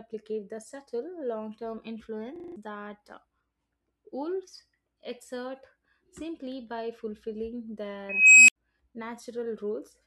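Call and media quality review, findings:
System hang loop, 2.36–2.56 s. Host or driver stalled while the audio hardware kept replaying its ring buffer: one 40 ms slice repeats 5 times at 25 Hz, giving a coarse buzzing stutter. About a fifth of a second of speech lost.

Unstable filter, 8.09–8.56 s, right after "exert simply by fulfilling". A recursive filter with bad coefficients diverged. A tone around 3 kHz swells over 390 ms into clipping, then numeric overflow mutes output for 77 ms until the filter resets.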